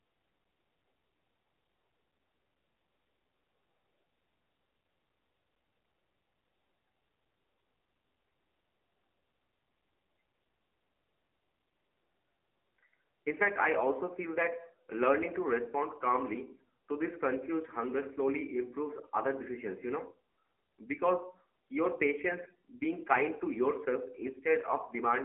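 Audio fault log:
Throughout, AMR narrowband mobile codec. The speech is confined to a phone band of roughly 300 Hz to 3.4 kHz, with nothing above 3.8 kHz. Its voice, rebuilt by a vocal-tract model driven by sparse pulses, sounds plainly buzzy and synthetic, which fits a low mode near 7.4 kbps.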